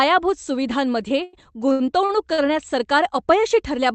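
From 1.23 to 2.4 s the speech suffers repeated stalls (stutter): five times the jitter buffer ran dry because packets arrived late, and the receiver stretched the last sound to cover each wait, about 267 ms in all, the longest near 97 ms. Nothing is lost, unlike a dropout, which leaves silence or a clipped syllable. The speech instead drags and hitches, with the call audio limited to an 8 kHz band.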